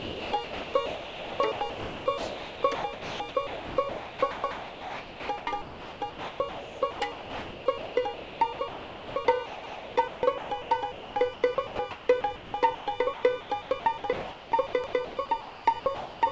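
From 0.0 to 12.87 s the audio keeps dropping out into a smooth synthetic hiss, about 8.3 s of it in total. That's likely sound chopped by the voice detector, with comfort noise filling the gaps. The same chopping returns from 13.14 s to the end at 16.31 s. Overlapping chunks show up at 4.44–4.64 s, 9.64–9.84 s and 14.84–15.04 s: every 5 s a 200 ms piece plays twice, giving a little stutter at each join. The call path's G.722 leaves nothing above 8 kHz.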